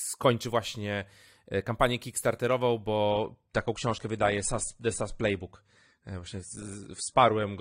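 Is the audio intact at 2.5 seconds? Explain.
Yes, the speech is intact at 2.5 seconds, with no audible fault at that moment.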